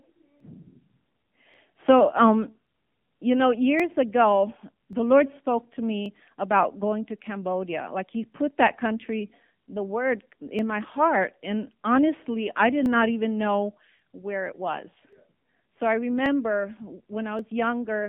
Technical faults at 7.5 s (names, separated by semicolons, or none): AMR narrowband mobile codec; clock drift buffer slips